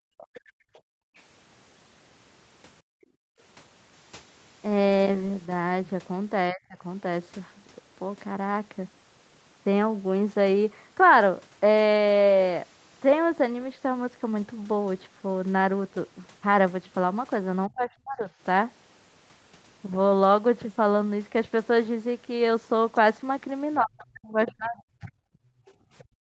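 A speech recording in which the echo canceller clamped the microphone while the loudspeaker played, so the background was gated by the echo canceller from 0.0 to 3.4 s, dipping by as much as about 36 dB for roughly a second and a half in total. It did so again from 25.37 s to the end, by about 28 dB, leaving the room tone sounding pumped and dropping out. Incomplete echo removal likely let the other side's voice leak through from 0.18 to 3.06 s and from 22.96 to 26.04 s, at around 25 dB below the talker, heard as a faint second voice under the speech. Three times the canceller apparently met both sides talking together and turned everything down, so speech was suppressed in double talk at 6.52–6.84 s (about 25 dB), 17.68–18.3 s (about 35 dB) and 23.81–25.09 s (about 40 dB), with the voice sagging or breaking up in patches.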